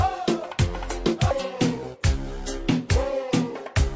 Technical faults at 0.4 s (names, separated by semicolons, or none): none